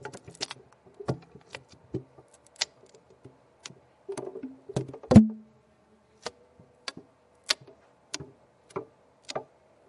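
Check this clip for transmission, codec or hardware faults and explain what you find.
Checking this clip turns up no faults to explain.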